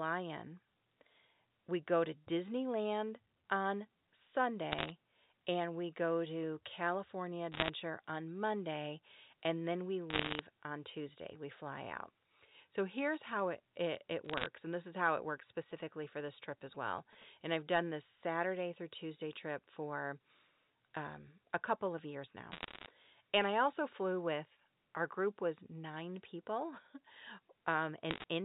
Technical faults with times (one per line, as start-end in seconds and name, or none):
4.72-4.92 bit errors on a digital phone line
7.52-7.70 bit errors on a digital phone line
10.10-10.39 bit errors on a digital phone line
14.25-14.46 bit errors on a digital phone line
15.57-17.23 GSM signalling bursts
22.52-22.86 bit errors on a digital phone line
28.11-28.24 bit errors on a digital phone line